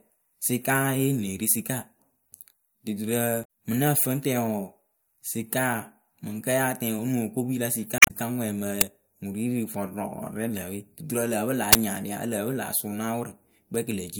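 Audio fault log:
3.41–3.45 s and 7.96–8.11 s, damaged data in a compressed stream: a brief glitch of misdecoded audio, the second lasting about 0.15 s. Corrupted bytes make the decoder misread frames and hunt for the next header. Unlike a buffer fault, this sounds like garbled coded audio rather than raw noise.
8.81 s and 11.73–11.75 s, uninitialised buffer: a loud crack and a burst of digital noise, 5.8 ms and 23 ms long, which fits 256-sample and 1024-sample buffers played before audio was written. Their exact buffer-length durations separate them from codec squawks.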